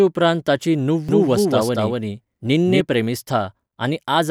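From 1.09 to 2.81 s the speech has a doubled audio track: a second, equally loud copy trails roughly a fifth of a second behind, dry and full-band, cutting in and out abruptly. Likely a second capture path or misaligned edit layering it twice.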